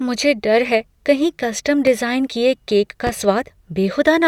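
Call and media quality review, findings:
Loud pop, 1.87–1.91 s and 3.07–3.11 s: single sharp pops over the speech, about 5 dB then about 10 dB above it. Likely a voltage step from a connector, switch or static. Waveform shows brief spikes; spectrogram shows thin full-band vertical lines.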